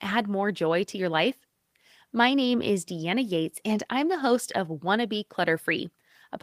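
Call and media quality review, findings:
No faults found in this speech recording.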